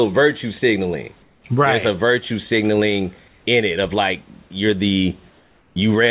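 A speech recording that has passed through a narrowband call path, with nothing above 4 kHz, consistent with G.711 mu-law at 64 kbps. The sender's voice detector likely switched to discontinuous transmission during pauses, and the receiver filled them with comfort noise in place of the background. From 1.22 to 1.44 s, just after "virtue signaling", and again from 5.3 to 5.76 s, the room's real background, about 37 dB below the speech, is swapped for a smooth, featureless hiss about 4 dB and about 3 dB quieter respectively, so the room tone flattens and dips. A separate fault is sound dropped by the voice detector, which likely mistook part of the sound for background and stopped sending. From 4.48 to 4.50 s, right after "in it of like", about 10 ms of speech is replaced by synthetic noise.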